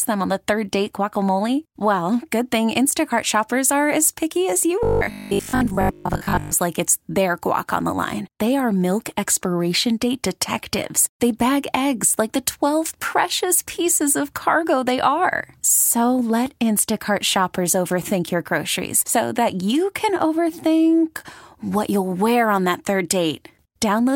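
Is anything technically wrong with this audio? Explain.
Yes. From 4.83 to 6.53 s, between "as picky as you" and "like it's their guac", the speech becomes a rigid metallic 50 Hz buzz: robotic sound, likely from repeated 20 ms buffers replacing most of the audio.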